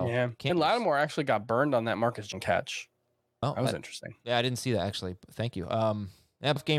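You get four quick blips in the speech, at 0.49, 2.32, 3.42 and 6.55 seconds, each a short glitch lasting under 20 ms. That's damaged data in a compressed stream: data in those spots came through wrong, so the decoder misread the frames there, lost its footing, and had to hunt for the next valid frame header before playback settled again.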